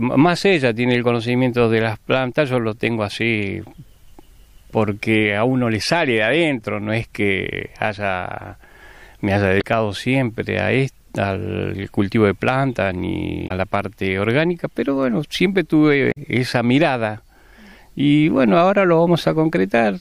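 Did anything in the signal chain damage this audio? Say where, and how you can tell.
Yes: short glitches at 9.58–9.65, 13.44–13.51 and 16.08–16.17 s mark damaged data in the compressed stream, where the decoder misreads corrupted frames, then resyncs.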